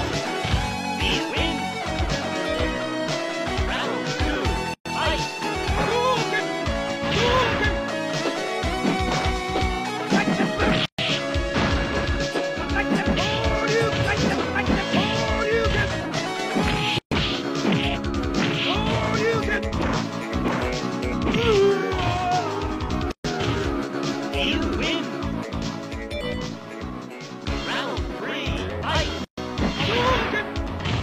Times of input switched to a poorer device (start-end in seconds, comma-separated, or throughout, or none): none